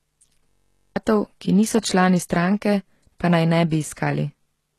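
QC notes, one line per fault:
Throughout: low-bitrate audio saved at a high bitrate. The file is MP3 at a generous rate, yet the sound has the smeared, watery texture of a much harsher encode, and nothing exists above 12.3 kHz. The likely cause is an earlier pass through a very low-rate codec, of the order of 16 kbit/s HE-AAC. The later high-rate encode kept those losses and added little. On a spectrogram the energy stops at a hard flat ceiling near 12.3 kHz, with blotchy, smeared detail below it.
0.49–0.96 s: system hang loop. The audio stops moving forward and one 21.33 ms fragment repeats 22 times. This happens because the playback hardware kept cycling the same buffer while the system stalled. The length fits a 1024-sample buffer. At 46.9 repeats per second the loop is heard as a steady buzz rather than a stutter, and about half a second of real sound is lost before "ki niso člani stranke". 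The waveform shows an identical short cell tiled end to end. The spectrogram shows evenly spaced harmonic lines at multiples of 46.9 Hz.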